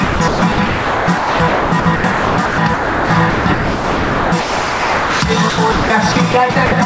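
Gain pumping runs through the whole clip, about 10 dB of swing, and it is likely caused by input gain set far too high with a fast limiter or compressor clamping down on every loud sound. Loud and soft moments sit unnaturally close in level, giving a squashed, breathing texture over a top end that stops near 8 kHz, which fits a G.722 call path at 64 kbps.

Sound chopped by the voice detector appears from 0.04 to 5.22 s, likely caused by the sender's voice detector repeatedly switching transmission off and on. About 3.9 s of that stretch was swapped for comfort noise in the RFC 3389 style, so quiet passages and the edges of sounds drop out and are replaced by synthetic noise. The effect is choppy.

The same chopping returns from 5.50 to 6.72 s, much lighter this time. Only about 0.42 s is replaced by comfort noise, so far less of the sound is lost, but the chopping still leaves holes where the sound was replaced.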